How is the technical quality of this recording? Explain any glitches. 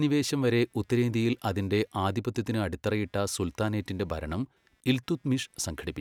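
The speech carries a faint fault the whole way through. Computer activity noise: a quiet buzz pulsing around 200 times a second, well below the voice, as processor or mouse load shifts the audio ground.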